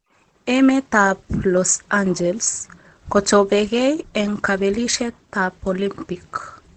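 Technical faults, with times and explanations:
Throughout, Opus compression: the speech sounds muffled and hoarse, with a plainly audible dull, rough coloring and nothing above about 8.4 kHz, so sibilants lose their crispness. This likely comes from Opus running at a low rate, which fits roughly 16 kbps, where the encoder shifts to its SILK speech mode at wideband bandwidth. That mode models the voice rather than coding every band, trading upper frequencies and fine texture for intelligibility.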